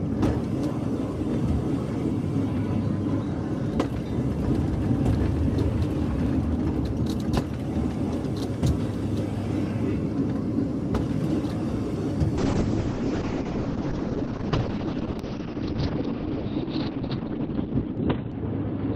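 The audio shows a call bitrate drop from 12.38 s to the end: bandwidth collapses from about 20 kHz to 4 kHz and the sound turns rough and muffled for the last 5 s or so. This fits the encoder being cut from around 128 kbps to 7 kbps.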